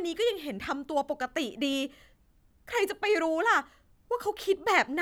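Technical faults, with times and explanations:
1.73 s and 4.41 s: dropped samples. Each is a single sharp click in the speech, likely from a handful of samples (about a tenth of a millisecond) missing, so the waveform jumps abruptly. Unlike a dropout, no sound goes silent; only the step is heard.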